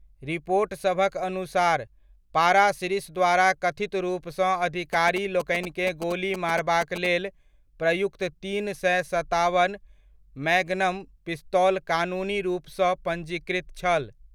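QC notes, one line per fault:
4.93–7.07 s, GSM signalling bursts: a galloping run of short buzzes sits about 10 dB under the speech for roughly two seconds. A nearby 2G phone is sending brief groups of radio bursts as it signals to the network, and something in the audio chain rectifies that RF into the audible band. Each burst repeats at 216.7 Hz, which gives the buzz its pitch, while the on-off grouping produces the dit-dit-dit rhythm.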